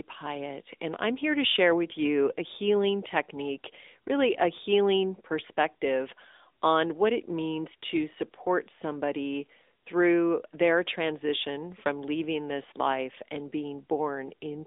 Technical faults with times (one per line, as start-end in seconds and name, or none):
0.00-14.67 AMR narrowband mobile codec